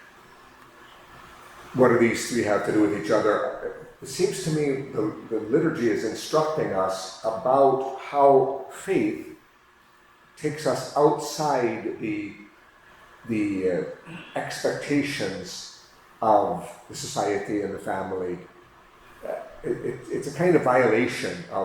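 Nothing here trips the ear as a technical fault; the audio just runs along without a stumble anywhere.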